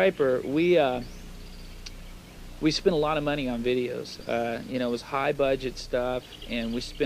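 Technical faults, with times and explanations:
No technical faults can be heard in this clip.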